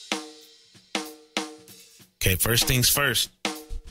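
No technical fault can be heard anywhere in the audio. Nothing in it calls for correction.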